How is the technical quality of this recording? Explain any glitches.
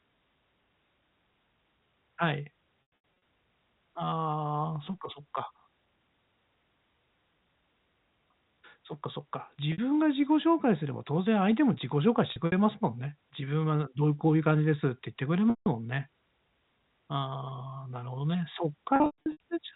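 The recording suffers from packet loss with pitch repetition in five places. Packets fail to arrive, and the receiver fills each gap by replaying the last pitch period of the speech and fading it out over about 50 ms. A short gap at 9.72 to 9.78 s (60 ms) sounds like a briefly held, buzzy tone, while a longer one at 15.50 to 15.66 s (160 ms) fades toward silence before the speech cross-fades back in. Three bursts of scattered losses come at 2.82 to 3.22 s, 12.32 to 12.52 s and 18.96 to 19.40 s. Their longest single runs, up to 120 ms, fade toward silence before the speech cross-fades back in. The gap lengths fit 20 ms packets. The narrow, telephone-band G.711 sound is still audible through the speech.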